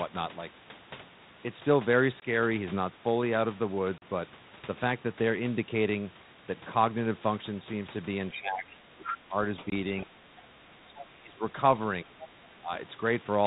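Speech carried over a telephone-band ADPCM link, where the codec itself adds only light coding noise consistent with 32 kbit/s G.726, shows three kinds of fault.

Packet loss on an ADPCM call occurs at 2.20–2.23 s (20 ms), 3.98–4.03 s (40 ms) and 9.70–9.72 s (20 ms). Audio vanished into hard-edged silence, and the decoder's predictor and step size lost track of the sender's, so the speech resumes briefly distorted before settling.

The other side's voice leaking through appears at 8.32–8.41 s, 9.05–9.17 s, 10.96–11.01 s and 12.03–12.28 s, at about 15, 5, 20 and 15 dB below the main speech. An echo canceller likely failed to remove loudspeaker playback from the microphone, letting scraps of a second voice through.

Speech suppressed in double talk follows at 8.35–9.36 s, 9.96–11.42 s and 12.04–12.71 s, with the main voice sinking by as much as about 15, 20 and 10 dB. While both sides spoke, the echo canceller likely could not separate its own talker from the echo and turned the talker down along with it.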